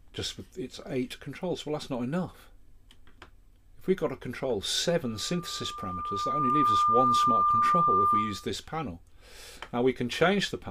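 From 5.03 to 8.52 s a loudspeaker feedback squeal appears. The microphone re-amplifies its own loudspeaker until a 1.2 kHz tone runs away, swelling over roughly a second and a half to about 10 dB above the sound. A spectrogram shows one brightening horizontal line, and the waveform envelope balloons.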